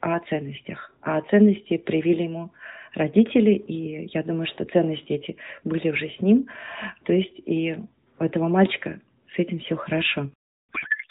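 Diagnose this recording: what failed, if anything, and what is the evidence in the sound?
A codec payload misread, a failure at the codec's packet-format stage, sets in at 10.72 s and runs to the end at 11.10 s. The speech abruptly gives way to garbled, warbling noise that barely tracks it, because the receiver unpacks AMR frames with the wrong bit alignment and decodes fields from the wrong positions.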